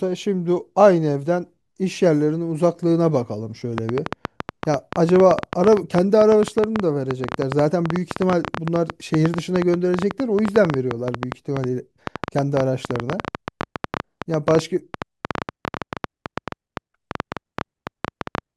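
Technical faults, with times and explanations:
3.78–18.39 s: train of clicks, about 10 per second at uneven spacing, roughly 15 dB above the speech, ticking through pauses too, likely interference or a faulty connection.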